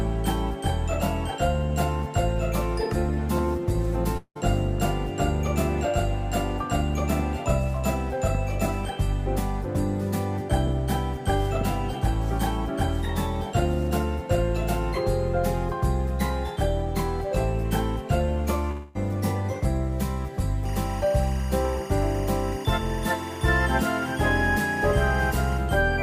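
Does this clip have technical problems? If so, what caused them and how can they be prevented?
Yes. A long network dropout is heard at 4.17 to 4.37 s and again at 18.71 to 18.97 s, likely from lost packets. About 180 ms, then 240 ms, of audio is replaced by a fading buzz; the first gap ends in brief silence. A jitter buffer with retransmission or forward error correction would prevent this.

Timecode bleed runs from 20.65 to 25.58 s as a chirping warble around 1 and 2 kHz, about 20 dB below the sound, at a 24 frames-per-second rhythm. Shielded, separated cabling and isolated timecode tracks would prevent it.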